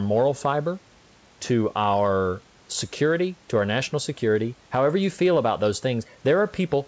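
No technical faults can be heard in the speech.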